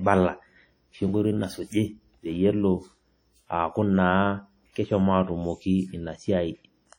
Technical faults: WMA compression

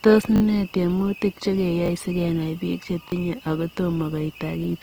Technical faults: Opus compression; repeated buffer

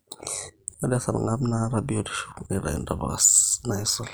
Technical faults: overlap-add ripple

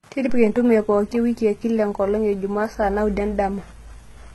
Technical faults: HE-AAC compression

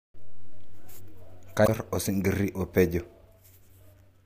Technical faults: damaged data in a compressed stream

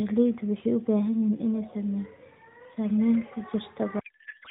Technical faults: codec payload misread

